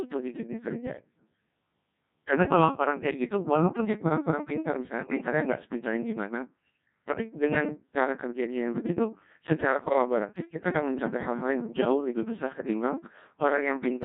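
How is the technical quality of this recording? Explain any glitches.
The technical quality is poor. The speech sounds robotic and buzzy throughout, and it breaks up twice. The whole recording carries Codec 2 vocoder sound at a low rate, about 1.6 kbit/s. Only pitch, voicing, energy and a spectral envelope survive, and the decoder rebuilds the speech from sine waves rather than keeping the waveform, so the damage is heavy.

From 5.01 to 5.18 s, and again from 9.84 to 9.93 s, the speech lurches into warbling, bleepy gibberish with sudden pitch and level jumps. These are bit errors on digital voice radio. In the first burst roughly one bit in ten flips, and in the second roughly one in twenty. Each bit steers a whole frame's synthesis, so a few corrupted frames scramble the rebuilt speech.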